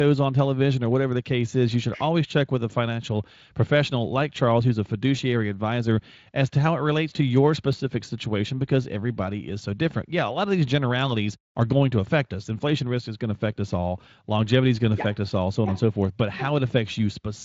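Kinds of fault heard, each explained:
Block of digital silence: a sharp tick at 7.73 s after "it relates to your", where 1.33 ms (64 samples) drops out, fitting a buffer not filled in time.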